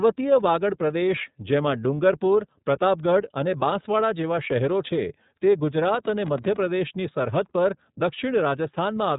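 iLBC codec coding runs through the whole clip. The speech is cut off above 3.8 kHz and carries a plainly audible rough, synthetic edge, because each frame's excitation is coded on its own. The coding uses iLBC's 30 ms, 13.33 kbps mode.

A train of clicks runs from 5.83 to 6.67 s: about fifteen similar pulses at an uneven pace, averaging 15.7 per second, each peaking at about the level of the speech. The result is a ragged ticking on top of the sound, likely from interference or a faulty connection.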